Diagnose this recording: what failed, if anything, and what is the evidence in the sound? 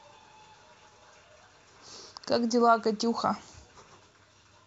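Nothing failed; the speech recording shows no audible faults.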